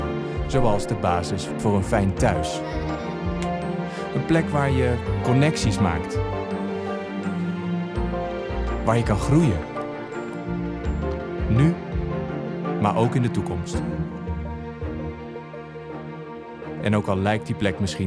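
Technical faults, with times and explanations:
No technical faults are audible at any point; the signal runs continuously, with no disturbance to its level, timing or tone.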